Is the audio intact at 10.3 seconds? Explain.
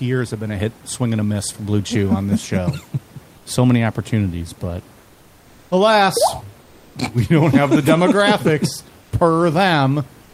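No. From 10.23 s to the end at 10.34 s, about 0.1 s, there is comfort noise in place of the background. The sender likely paused transmission during silence, as Opus DTX does, so the receiver filled the gap with synthetic noise. The genuine room noise, sitting about 32 dB below the loudest speech, gives way to a smooth, featureless hiss about 2 dB quieter, losing the texture the real background had.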